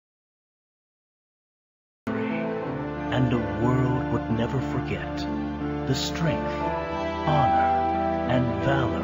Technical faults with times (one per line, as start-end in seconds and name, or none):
0.00-2.07 audio dropout to silence